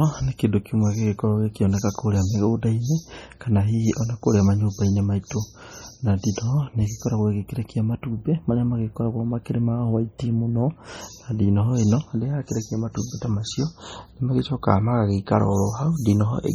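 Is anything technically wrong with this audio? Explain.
Yes. Throughout the speech the sound carries heavy MP3 compression artefacts, likely from encoding at a very low bitrate, which fits about 32 kbps. Short of bits, the encoder has cut the treble off at a fixed point and dropped weaker frequency components, which flicker in and out from one frame to the next. The result is a watery, swirling texture, metallic chirps on s sounds, and consonant onsets that smear instead of landing cleanly.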